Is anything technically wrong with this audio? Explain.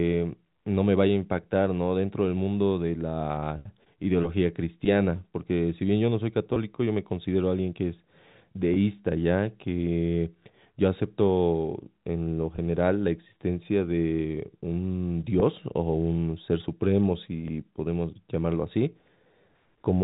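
Yes. Packet loss with pitch repetition occurs five times, at 6.54, 8.74, 12.56, 15.4 and 17.48 s. Each gap is about 20 ms, which fits a single dropped packet. The receiver filled it by repeating the last pitch period, so the speech briefly holds a slightly buzzy tone before continuing. The G.711 telephone coding limits the band to under 4 kHz.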